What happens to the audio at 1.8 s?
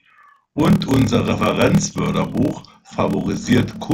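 At 1.8 s the speech is affected by a block size mismatch (padded), which runs through the whole clip rather than starting there. One stage writes shorter blocks than the next stage reads, consistent with 1024-sample writes, so the rest of each block is filled with silence. Those regular gaps produce a buzz at 38.3 Hz, and the speech plays back at 0.889 times normal speed while keeping roughly its natural pitch.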